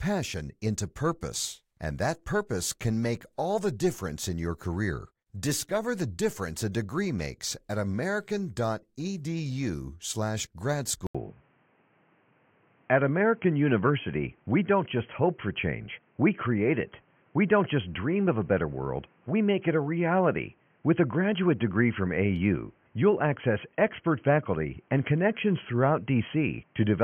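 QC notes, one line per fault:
11.07 s to the end: input switched to a poorer device, likely. After a brief gap of about 80 ms, the speech goes narrow and boxy, with nothing above 3.2 kHz, so it sounds like a headset in call mode or a cheaper mic took over. The level shifts by around 5 dB, and a new noise floor comes in, roughly 40 dB under the speech.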